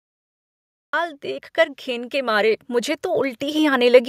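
The first 0.93 s is digital silence. At 0.93 s the speech starts abruptly, already partway through a sound. This is a cut-off start. Capture or streaming began late, so the opening of the utterance was never recorded. There is no natural onset and no gradual attack. The sound simply appears at full level. The listener hears the speaker as if joining mid-syllable, with the true beginning missing.

From 1.21 s to 4.04 s the level climbs steadily. This is automatic gain rising. The automatic gain control judged the input too quiet and raised its gain slowly, by about 10 dB over nearly three seconds. The speech and the background noise swell together, because the gain applies to everything in the signal. The effect is a gradual push forward of the whole sound, with the room noise growing louder along with the speech.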